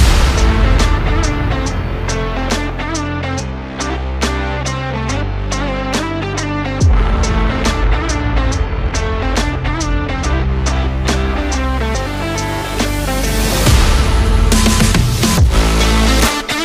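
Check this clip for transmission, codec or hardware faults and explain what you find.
No transmission, codec or hardware faults turn up in this clip.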